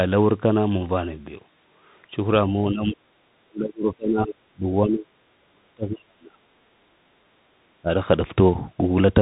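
Bluetooth CVSD headset codec damage runs through the whole speech recording: nothing passes above 3.8 kHz, consistent with a 64 kbps one-bit delta coder whose step size lags fast high sounds, leaving scratchy sibilants and granular hiss. Speech suppressed in double talk occurs from 2.43 to 5.11 s and 5.44 to 6.40 s, with drops of roughly 35 to 40 dB, plus a brief shallower dip at 7.82 to 7.91 s, likely an echo canceller muting the talker during overlap.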